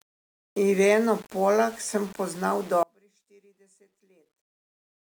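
A speech clip with a grainy, gritty edge throughout that shifts with the voice, likely low bit depth without dither, around 6 bits rounded, leaving noise only about 25 dB down. Then right after "sem poznal" at 2.83 s the audio drops out abruptly to a faint residue about 35 dB down, staying that way to the end, likely a lost signal on a still-live path.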